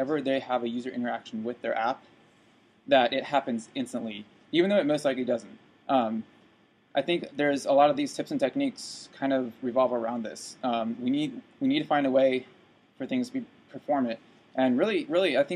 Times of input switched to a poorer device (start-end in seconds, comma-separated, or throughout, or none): none